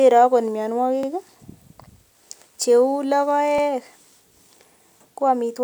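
At 1.03 to 1.08 s and again at 3.58 to 3.63 s, the speech stutters briefly. These are overlapping chunks. Each 2.5 s chunk starts before the previous one ends. So 50 ms of audio plays twice at the join, heard as a quick repeat.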